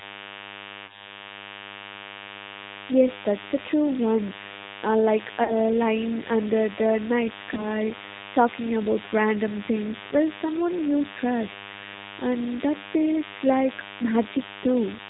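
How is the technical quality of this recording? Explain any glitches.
The quality is poor: a constant buzz and codec roughness run through the whole recording, and there are three brief dropouts.

DECT cordless phone buzz runs throughout. Radio bursts every 10 ms are rectified by the audio circuit, producing a thin 100 Hz buzz with harmonics, roughly 15 dB below the speech.

G.729 codec damage is audible throughout. The speech is rebuilt from a filter, a pitch predictor and a few pulses, so it sounds rough and synthetic, with nothing above 4 kHz. This fits an 8 kbit/s G.729 stream.

VoIP packet loss concealed by the speech codec occurs at 0.86–1.10 s, 5.44–5.55 s (just after "lying under the night") and 7.54–7.67 s (just before "lying under the night"). Each time, about 30 ms of audio went missing, which fits a single lost packet. The decoder extrapolated from its last frame, producing a fading smear that leaves the voice weak for some time after the gap.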